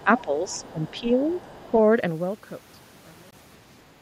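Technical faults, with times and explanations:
0.00 to 0.22 s and 0.48 to 1.71 s, other side's voice leaking through: a second, fainter voice sits under the talker, about 20 dB down at first, then about 30 dB down. This is likely residual loudspeaker echo the canceller missed, visible as a weak, separate harmonic stack on the spectrogram.
0.04 to 0.08 s, 0.24 to 0.49 s and 0.73 to 1.08 s, speech suppressed in double talk: the talker's level dips by roughly 10 dB. This is likely the echo canceller ducking both voices together when it cannot separate them. The waveform shows the envelope pinched in.
3.31 to 3.33 s, Bluetooth stall: the sound drops to 21 ms of silence and then resumes. This likely comes from the headphone buffer running dry while delayed packets were resent. On the waveform it appears as a short flat-line gap, and on the spectrogram as a thin vertical blank band.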